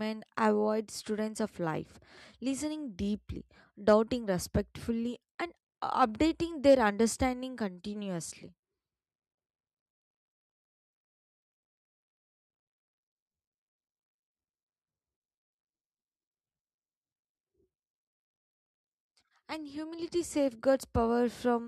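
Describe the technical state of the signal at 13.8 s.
At 13.8 s the signal is intact, with no audible fault at that point.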